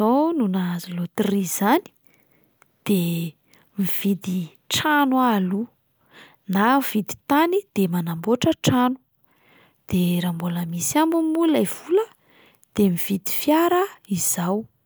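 A recording of speech with no technical faults to report. Nothing in the signal points to a problem in how it was captured, processed or delivered.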